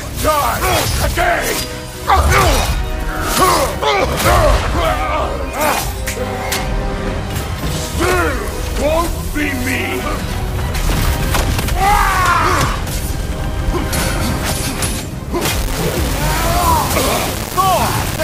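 From 15.41 s to the end at 18.24 s, the audio turns grainy, with error at roughly 10 dB below the signal that tracks it. The likely cause is low bit depth without dither, rounded to 4 bits. A waveform shows coarse stepped levels, and a spectrogram shows broadband noise following the signal.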